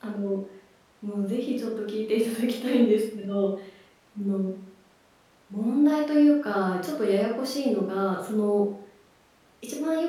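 No technical faults can be heard in the recording, so there is nothing to describe in time order.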